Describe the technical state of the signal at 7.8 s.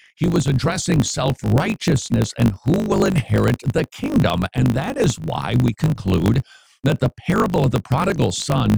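At 7.8 s the speech carries a steady 50 Hz buzz and plays about 1.07 times too fast with its timbre kept, as it does throughout the clip. This is a block size mismatch (truncated). One stage writes longer blocks than the next reads, consistent with 1024-sample blocks, and each block's tail is discarded.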